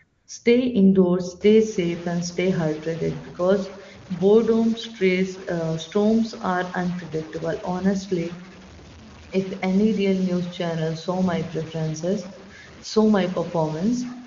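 From 0.03 to 0.27 s the phone treated the talker as silent and sent no speech frames for 240 ms. The receiver filled that gap with AMR comfort noise, a smooth, steady synthetic hiss in place of the real background, which switches in and then out.

From 1.41 s to the end, a distortion rides on the speech, and the pauses fill with noise rather than going quiet. The likely cause is a stuck bit, one data bit held at 0 or 1 that throws about half the sample values off by a fixed amount. Under this, the AMR wideband (HD Voice) coding sounds clean, which fits one of its top rates.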